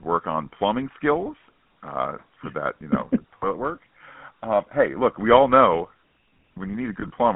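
GSM full-rate codec damage runs through the whole speech clip. The codec models the vocal tract as a filter and excites it with a sparse, regularly spaced pulse train, so the fine detail of the excitation is thrown away and voices take on a buzzy, gravelly grain that is plainly audible. The sound is confined to a telephone band of roughly 150 Hz to 3.4 kHz, and the overall character fits 13 kbps full-rate coding.

Lost GSM frames first appear from 3.38 to 3.47 s. For about 40 ms of missing data, the decoder keeps reusing the parameters of the last good frame, and the sound briefly freezes into a rough, metallic ring. The second instance, from 7.00 to 7.10 s, is more fragmented. The same 40 ms of loss is spread across about 140 ms in short gaps of around 20 ms, so the ring flickers in and out instead of holding steady.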